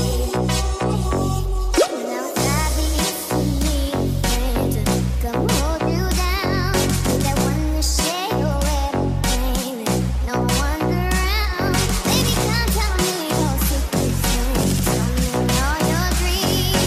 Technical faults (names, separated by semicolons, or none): none